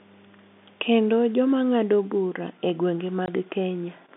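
At 3.26 to 3.28 s, just after "bura e gwenge", the speech drops out completely for 20 ms, with an abrupt cut in and out. This is packet loss filled with silence: a gap that short and square-edged fits a single lost 20 ms packet that the receiver replaced with silence. Around the hole, the narrow telephone band of G.711 coding is heard.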